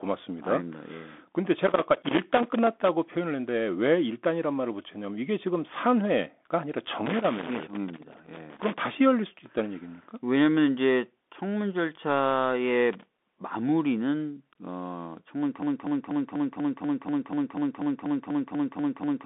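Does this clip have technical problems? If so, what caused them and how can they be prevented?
Yes, there are three kinds of problem. The whole clip has the Bluetooth CVSD headset codec sound: the speech sits in roughly a 200 Hz to 3.6 kHz band with nothing above 3.8 kHz, there's a granular hiss underneath, and s sounds turn scratchy. That fits a 64 kbps one-bit-per-sample link whose adaptive step can't keep up with loud, bright sounds. Switching the headset to a wideband profile like mSBC, or to a wired mic, avoids it.

There's loose connector crackle from 1.67 to 2.89 s, 7.06 to 8.86 s and 12.93 to 13.26 s. These are irregular bursts of scratching, where a worn or dirty contact keeps making and breaking as it moves and chops the signal. Cleaning or replacing the plug and securing the cable should fix it.

From 15.63 s to the end there's a broken-record loop. A 0.24 s fragment repeats back to back about fifteen times, and whatever should have played there is gone. 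The likely cause is a player, encoder or stream stalling and re-sending the last piece it held. Watching buffer health and restarting stalled streams prevents it.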